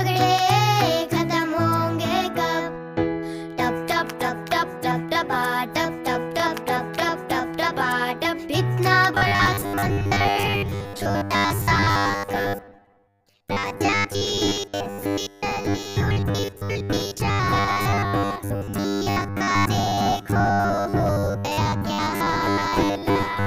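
From 9.15 s to the end at 23.46 s, the audio takes on robotic sound from repeated short buffers: a rigid, metallic buzz fixed at 100 Hz that still roughly tracks the original contour. The likely cause is new audio arriving too seldom, so the last 10 ms is looped to fill the gaps for most of that stretch while the real material is skipped. Unlike dropouts, there are no silences, and unlike flanging, the pitch never sweeps.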